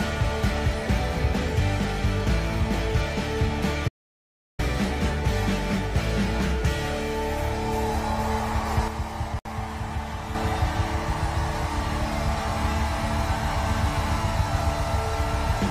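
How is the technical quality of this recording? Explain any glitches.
The recording has three distinct technical faults.

From 3.88 to 4.59 s there is an audio dropout to silence. The sound cuts off abruptly and about 0.7 s is lost. The gap is silent, with no background noise at all. That points to the input failing while the recorder kept writing silence. The likely cause is a brief disconnect, a failed link or an accidental mute. Whatever happened in that interval is gone.

At 8.88 s there is a sudden gain jump. The level drops by about 6 dB in a single step. It stays lower until 10.35 s and then jumps back. The background noise falls and rises along with the sound, so the change happened in the signal chain. A 6 dB step likely comes from a digital gain change applied without a ramp, such as a one-bit shift.

At 9.39 s, inside the quieter stretch, there is a gap at a join of encoded pieces. 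A gap of about 62 ms opens in the middle of continuous sound. Its edges are smeared. The sound then resumes exactly where it stopped, with nothing missing. This fits two separately encoded segments joined without trimming. The encoder's start-up delay and the padded final frame both stay in and leave the short hole.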